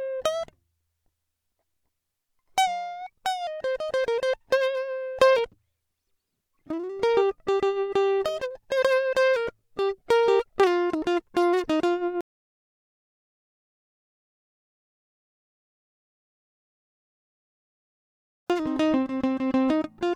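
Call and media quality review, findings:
Audio dropout to silence, music, 12.21–18.50 s: cuts out mid-flow, 6.29 s lost, resumes abruptly. Waveform flat; spectrogram blank with no noise floor. Likely input loss (device disconnect, failed link or mute) while encoder kept writing zeros.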